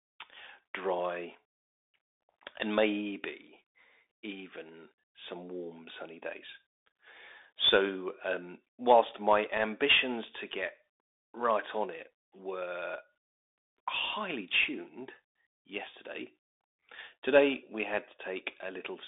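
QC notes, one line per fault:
Throughout: Bluetooth CVSD headset codec. The speech sounds thin and boxed in with scratchy s sounds, a gritty hiss, and distortion where loud high sounds outrun the one-bit delta's adaptive step. The band runs roughly 300 Hz to 3.7 kHz, with nothing above 3.8 kHz, which fits a 64 kbps CVSD link.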